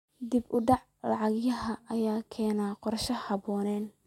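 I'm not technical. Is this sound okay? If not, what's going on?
Yes, it sounds fine.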